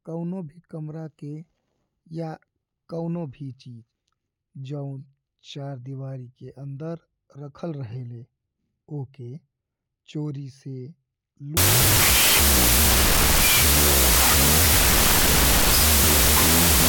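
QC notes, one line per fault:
11.57–16.89 s, wrong sample width: from 11.57 s to the end, loud broadband noise buries the speech, which drops to half speed, about an octave lower. The sound fits 32-bit float data read as 16-bit integers. Each true sample splits into two values: one carries the float's sign and exponent bits and tracks the signal, the other is near-random mantissa bits. Unlike byte-order errors, speed and pitch change.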